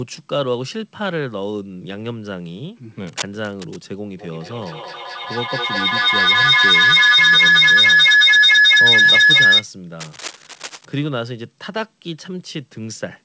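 From 3.07 to 3.84 s, a worn cable or connector was likely being moved, its contact resistance jumping about, so cable scratch noise rustles just under the speech. From 4.18 to 9.68 s, a feedback howl sets in: the loop between a nearby microphone and loudspeaker gains level each pass, building to a whistle around 1.5 kHz that peaks about 13 dB above the speech and pulses roughly every fifth of a second. The same cable scratch noise returns from 9.99 to 10.95 s.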